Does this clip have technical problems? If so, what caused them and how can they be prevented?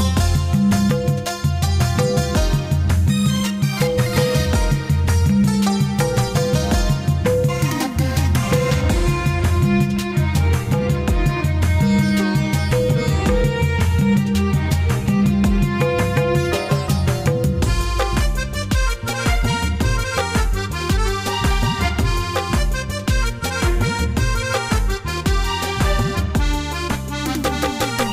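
No, no technical faults can be heard anywhere in this clip. With nothing going wrong, there is nothing here that needs preventing.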